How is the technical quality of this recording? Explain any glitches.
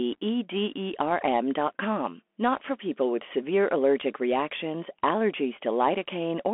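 Quality is poor: the whole recording carries Bluetooth CVSD headset codec damage, plainly audible from start to finish. CVSD sends one up-or-down bit per sample while adapting its step size, which fits a 64 kbps headset link. Speech sits in a narrow band of roughly 250 Hz to 3.4 kHz, with nothing above 3.8 kHz. Sibilants turn scratchy, loud bright passages distort when the step cannot keep up, and a granular hiss runs underneath. A spectrogram shows a hard ceiling near 3.8 kHz with a speckled noise floor.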